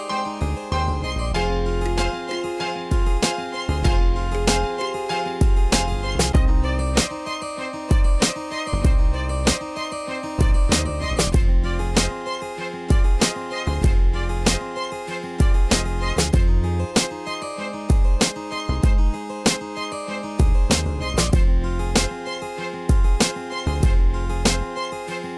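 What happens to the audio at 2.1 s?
Nothing goes wrong at 2.1 s; the audio plays through that moment intact, with no dropout, glitch or other fault.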